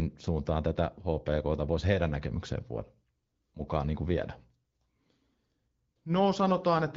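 No faults can be heard in the speech, which comes through an AMR wideband (HD Voice) codec at 12.65 kbit/s, a rate at which that codec keeps speech clear.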